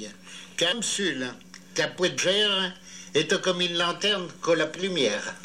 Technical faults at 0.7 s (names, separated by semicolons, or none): compressed frames skipped